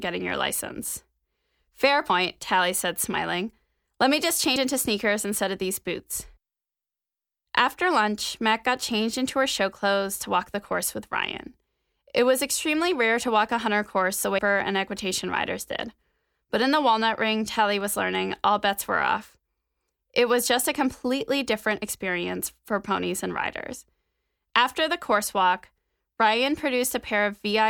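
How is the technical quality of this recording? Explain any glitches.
The speech has three dropouts where compressed frames are skipped. At 2.10 s, at 4.56 s between "me just" and "into sneakers instead of", and at 14.38 s between "a hunter course the" and "and equitation riders did", whole 32 ms frames never play. The first two lose about 70 ms each. The third loses about 300 ms. The audio jumps forward. A waveform shows an abrupt envelope splice, and a spectrogram shows the harmonic pattern changing suddenly at a vertical seam.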